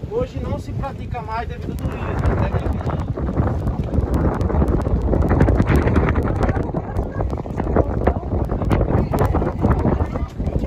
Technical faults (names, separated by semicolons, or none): word clock ticks